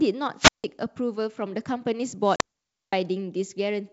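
The wireless microphone's radio signal fades twice until the receiver's squelch shuts the output, a wireless microphone squelch dropout. From 0.36 to 0.64 s hiss swells, then about 0.16 s of near silence before the speech returns. From 2.22 to 2.97 s the same happens with a longer mute of about 0.52 s.

Inside that second dropout, between 2.36 and 2.41 s, about 40 ms of audio, roughly a couple of packets, goes missing in packet loss on an ADPCM call. The missing audio is replaced by silence, leaving a hard-edged gap, and the decoder's predictor and step size lose track of the sender's.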